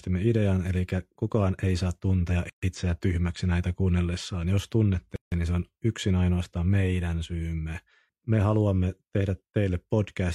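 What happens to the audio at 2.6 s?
The speech drops out in a gap at a join of encoded pieces, from 2.50 to 2.63 s, right after "kukaan ei saa tuntea". Separately encoded segments were joined with their start delay and end padding left in. That leaves a gap of about 131 ms with smeared edges, so the truly silent part is shorter. The speech then resumes where it stopped, with "itseä tyhmäksi näitä kuunnellessaan".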